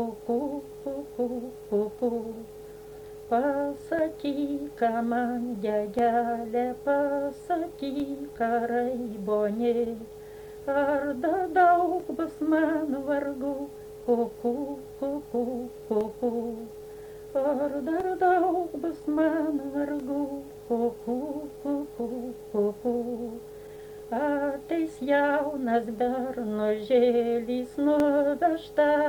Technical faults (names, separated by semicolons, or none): periodic USB or driver dropouts